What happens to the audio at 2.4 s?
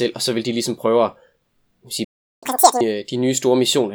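The speech halts in a playback stall from 2.04 s to 2.43 s, about 380 ms of silence, likely because the player ran out of data or its thread was blocked.

Straight after, from 2.43 s to 2.81 s, comes catch-up at higher speed: the backlog is resampled to play at 2× speed, so the speech rushes and jumps up roughly ten semitones. Unlike a pure pitch shift, tempo rises with pitch.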